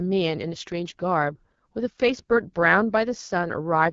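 AMR wideband (HD Voice) coding runs through the whole clip. The speech is carried by a model that drives a vocal tract filter with a sparse set of pulses, and nothing reaches above about 7.4 kHz, with the top band filled by shaped noise rather than real detail. The damage is plainly audible: the speech sounds rough and raspy, which fits the 8.85 kbit/s mode, one of the codec's two lowest rates.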